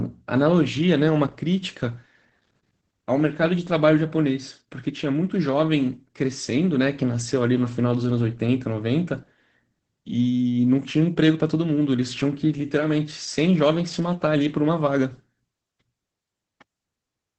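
Throughout, the speech sounds muffled, hoarse and faintly robotic, with nothing above 8.6 kHz. This is Opus voice compression in wideband SILK mode, which fits a bitrate of about 12 kbps.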